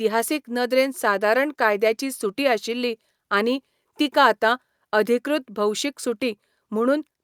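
Nothing in this short speech recording stands out as a technical problem; there's nothing to flag at any point in it.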